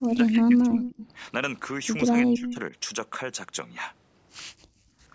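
Speech suppressed in double talk runs from the start to 0.95 s and again from 2.12 to 2.73 s: the voice dips by around 15 dB at its deepest. The likely cause is an echo canceller that, with both ends talking at once, could not tell its own talker from loudspeaker echo and pulled both down, costing about a second of level in the first stretch and under half a second in the second.

An echo leak overlaps each of those stretches, from 0.75 to 1.08 s and from 2.38 to 2.56 s. A faint, delayed copy of the voice trails it by about 0.2 s (202 ms, then 204 ms), sitting roughly 10 dB below the direct speech. This is likely the far end's loudspeaker feeding its microphone, with that side's echo canceller leaving part of the pickup in the return path, so the voice comes back a fraction of a second late.

Background gated by the echo canceller follows from 4.53 to 4.98 s. The room sound behind the speech falls away by about 40 dB, close to silence, for roughly half a second before returning. 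The canceller clamped the microphone hard while the loudspeaker was active and released it once playback stopped, leaving a hole in the ambience. The call's microphone processing, which leaves nothing above 8 kHz, is working normally.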